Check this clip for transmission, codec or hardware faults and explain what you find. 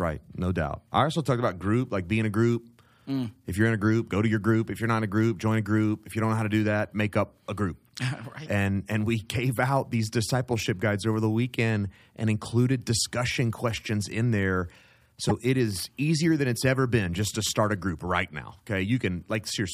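One fault appears in this speech clip. Damaged data in the compressed stream occurs at 15.29 to 15.31 s, between "discussion questions in there" and "it is easier than". Corrupted bytes make the decoder misread the frame and lose sync, producing a brief glitch in the audio.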